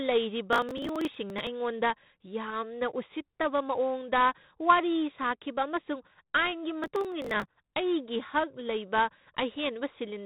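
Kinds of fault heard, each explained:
4-bit ADPCM compression: throughout the clip, each sample is stored as a coarse 4-bit step from a prediction, leaving a gritty hiss that rises and falls with the speech and roughens sharp onsets. Nothing remains above 3.8 kHz, which fits a 32 kbps stream.
Processor overload crackle: from 0.53 to 1.47 s and from 6.84 to 7.46 s, the processor misses deadline after deadline on buffers of a few milliseconds. Each missed buffer is skipped, so dozens of hard-edged gaps merge into tearing crackle over the speech.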